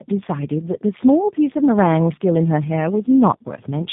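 Speech here has tandem speech coding all the way through. It sounds like it went through one low-rate speech codec, was decoded, and was then squeezed through a second one, with each coder working on the damage the last one left. The result is rough, muffled and warbly, and nothing comes through above 3.8 kHz. That fits AMR-NB at 7.4 kbit/s passing over a G.711 link into G.729A at 8 kbit/s.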